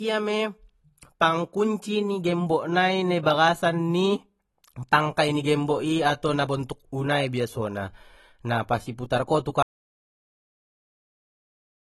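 Speech throughout, with plainly audible AAC compression damage: dull, smeared and fizzy on sibilants, nothing above 12.1 kHz, likely from an AAC-LC encode at around 32 kbps. At 9.63 s there's an audio dropout to silence that runs to the end, dead silence with no room tone, likely from the input being lost mid-recording.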